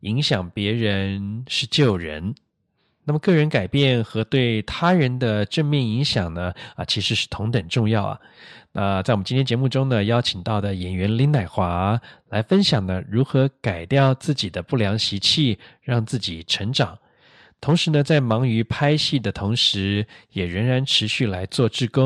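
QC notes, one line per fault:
No faults heard anywhere in the speech.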